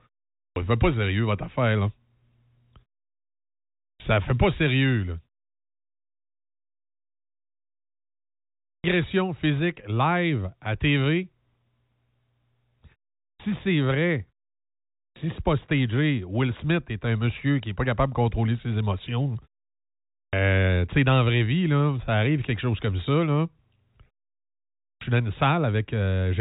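Speech here suffers from an output device that sleeps through silence and wakes slowly, giving a clipped start after each pause at 0.44, 3.88, 8.73, 13.28, 15.03, 20.2 and 24.88 s: 110 to 130 ms is swallowed each time, so sound bursts abruptly out of silence.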